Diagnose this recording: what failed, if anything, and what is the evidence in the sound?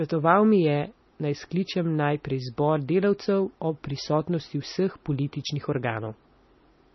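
The failure sits at the codec stage and is most likely MP3 compression, heavy throughout the speech. Nothing is present above 5.9 kHz, a hard treble cut-off that points to a very low bitrate of about 24 kbps. What separates this from a simple low-pass filter or a narrowband phone path is the watery, swirling texture inside the remaining band. Weak spectral lines drop in and out from frame to frame, s sounds carry metallic chirps, and consonant attacks come out smeared.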